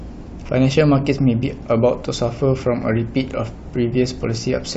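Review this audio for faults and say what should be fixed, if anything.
Nothing needs fixing; the speech signal holds steady with no audible technical problems anywhere in the recording.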